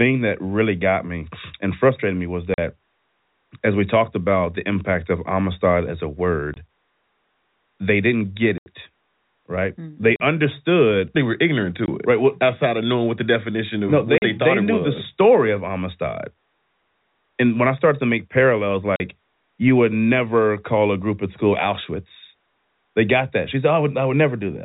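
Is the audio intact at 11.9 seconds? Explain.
No. Packet loss filled with silence cuts the speech from 11.86 to 11.88 s. One 20 ms stretch, fitting a single lost packet, was replaced by digital silence, leaving a brief hole with hard edges. It shows as a flat line on the waveform and a clean vertical blank stripe on the spectrogram.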